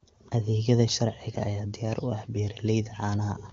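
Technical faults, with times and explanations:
No technical faults are present in this clip.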